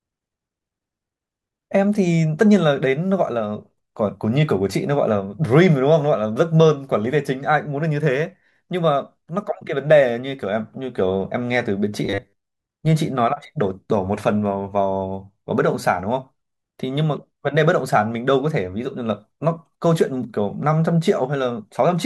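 From 12.05 to 12.44 s, new audio likely arrived too seldom, so the last short buffer was replayed to fill gaps. Repeating about half the time, it produced robotic sound from repeated short buffers: a rigid metallic 100 Hz buzz, loosely following the voice.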